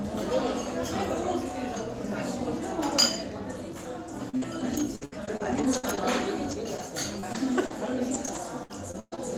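A recording of everyday sounds breaks up with repeated packet loss (robotic sound) from 4.29 to 5.99 s and from 7.20 to 9.19 s, where nine and then eight gaps, the longest 64 ms and 121 ms, are patched by stretching the previous sound, leaving a choppy texture with pieces missing. At 6.51 s and 6.78 s, a lost packet rebuilt from error correction sounds different: there is no hole, just a 20 ms frame that turns briefly rougher and noisier.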